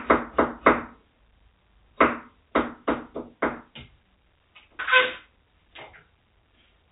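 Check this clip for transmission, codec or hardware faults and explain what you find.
No transmission, codec or hardware faults.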